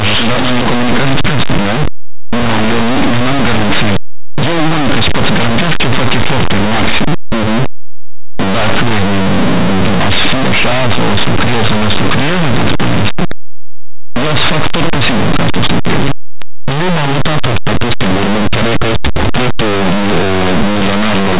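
A speech recording, distorted from start to finish by linear audio read as companded: the samples were written as plain linear 8-bit values but decoded as mu-law codes. Because the expander treats each byte as a logarithmic code, small values just to one side of zero come out as the largest outputs while those on the other side stay small, so the quiet parts of the waveform become loud, harsh distortion across the whole clip.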